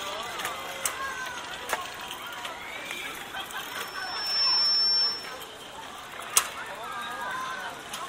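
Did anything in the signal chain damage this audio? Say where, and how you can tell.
Yes. A loudspeaker feedback squeal in the microphone-to-loudspeaker loop, from 3.68 to 5.48 s: a 5.4 kHz tone swells within a second to about 10 dB above the sound. A steady whine would hold its level rather than grow by itself.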